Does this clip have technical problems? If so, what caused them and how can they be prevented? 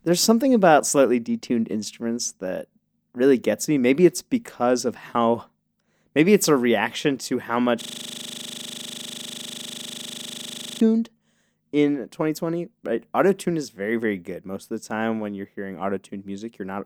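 Yes. A system hang loop from 7.82 to 10.80 s: the driver froze while the audio hardware kept replaying one 40 ms buffer, so a sliver of speech repeats some 75 times, heard as a rough 25 Hz buzz. Prevent it with stable drivers and a watchdog that mutes output when buffers stop updating.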